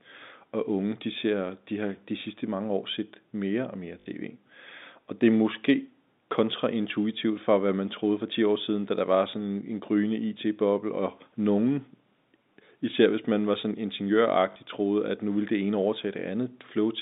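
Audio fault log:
4.00–4.06 s and 14.52–14.56 s, packet loss with last packet repeated: after "set mere og mere" and before "troede at nu ville", one short chunk loops, causing a brief robotic stutter buzzing near 50 Hz (fits 20 ms packets). The waveform shows identical repeated blocks.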